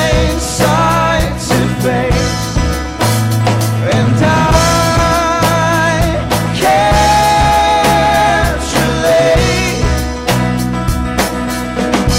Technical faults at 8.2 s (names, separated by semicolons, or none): hard clipping